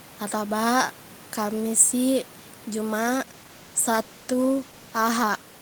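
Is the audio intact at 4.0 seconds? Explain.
No. At 4.0 s the clip is inside a call bitrate drop that starts at 3.0 s and runs to the end of the clip. The call's bandwidth estimate fell, so the encoder was told to spend far fewer bits, going from 32 kbps down to 15 kbps. With less than half the bits, the speech is coded more coarsely. It sounds rough and watery, and the top end turns dull and muffled. The quiet room noise, about 25 dB below the speech, is part of the recording and is not a fault.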